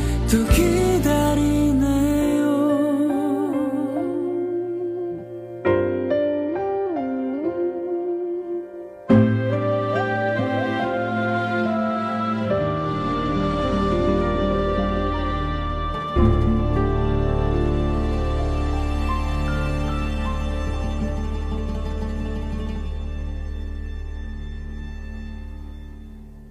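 No technical faults can be heard anywhere in the audio; the signal stays continuous and intact throughout.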